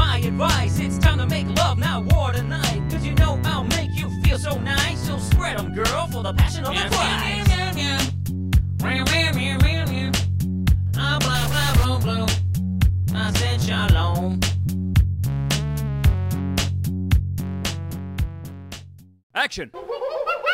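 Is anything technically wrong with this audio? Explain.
Yes. A stuck bit runs from 11.35 to 11.85 s. The audio turns harshly buzzy and distorted for that half second, and quiet moments fill with noise. The likely cause is one data bit frozen at a fixed value by a broken line or converter. About half the samples are pushed off by that bit's weight, a step of roughly -25 dBFS. Because the error follows the waveform's shape and sign, the noise tracks the signal and also appears during low-level passages.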